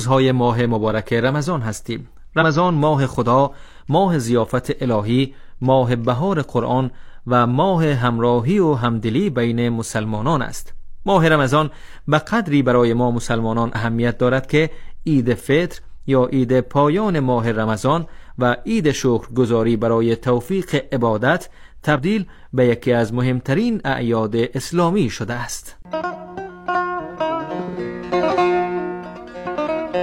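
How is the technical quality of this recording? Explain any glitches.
The recording has five brief glitches from damaged data in a compressed stream, at 2.37–2.43 s, 13.70–13.75 s, 21.92–21.99 s, 26.10–26.15 s and 29.31–29.36 s. Corrupted bytes make the decoder lose sync and hunt for the next frame. Each is heard as a short chirp or blip.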